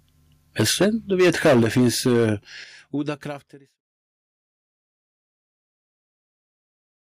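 Microphone overload runs from 0.59 to 2.29 s. The peaks in this stretch have their tops sheared flat, roughly a tenth of the samples, with the signal pushing about 14 dB past full scale. The loudest syllables take on a harsh, crackling edge. The likely cause is an input volume set too high for the converter, so the waveform hits its ceiling and the excess is simply cut away.

Microphone volume stepped down occurs at 0.61 s, 1.62 s and 2.64 s, by about 2 dB, 6 dB and 8 dB. Each time, the voice and the background drop together in a single abrupt step rather than a gradual change, and the first two steps come while the sound is still distorting. This is likely the call software reacting to the overload by cutting the device's input gain. The last step falls near the start of the closing fade-out, which is complete by 3.82 s.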